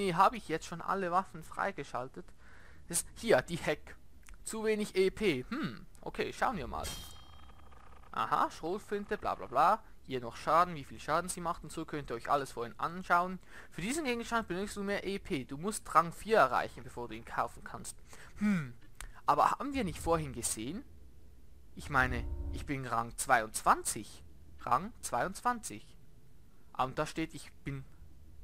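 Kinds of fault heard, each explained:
Bluetooth SBC bit pool drop: from 0.95 to 3.16 s the treble dulls and grit creeps in, which fits the encoder's bit budget being roughly halved.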